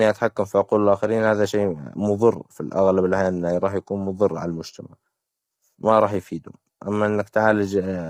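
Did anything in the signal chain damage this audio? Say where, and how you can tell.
Yes, likely at the codec stage: the whole clip has that rough, grainy low-delay AAC compression character, with noise filling between the speech harmonics and a thin, synthetic top end. Short frames blur pitch detail, and the heavy damage fits a low bitrate around 24 kbps.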